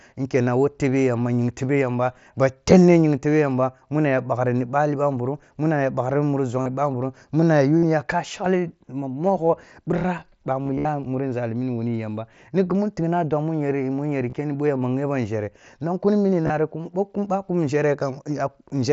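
Speech recorded over a Bluetooth headset through the mSBC wideband codec, with concealed Bluetooth headset packet loss. Short gaps fall at 6.62 s, after "muna ya bakhri ni", then at 7.78 s, 14.30 s and 16.43 s, the last one after "nong kuni". Each lasts 30 to 45 ms. The receiver filled every gap by repeating a matching slice of the preceding waveform. The worst burst runs from 10.63 to 10.89 s, just before "muri nzali nuri wani". It loses about 170 ms in scattered runs up to 67.5 ms long, heard as a held buzzy tone with a slight warble as the real sound returns.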